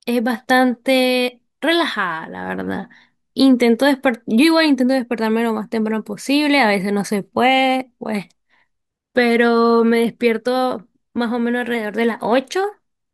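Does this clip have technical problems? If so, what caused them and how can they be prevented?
Yes: a drift correction step runs from 11.75 to 12.48 s, where the speech abruptly plays about 5.2% fast and rises roughly 88 cents, close to a semitone, before snapping back to normal pitch and pace. Speed and pitch move together, so the sound is briefly both sped up and audibly detuned. The likely cause is clock-matching software correcting accumulated drift between two devices by jumping the playback rate in one step to rebalance its buffer. To prevent it, lock both devices to a shared clock or use a resampler that corrects drift gradually in tiny, inaudible increments.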